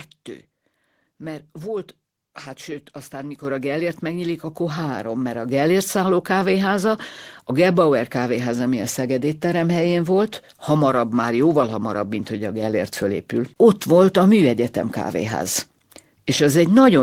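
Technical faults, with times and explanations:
3.45 s and 5.49 s, microphone volume stepped up: input gain raised in single jumps, about 8 dB after "sőt aztán", then about 4 dB after "három mert a", lifting voice and background together.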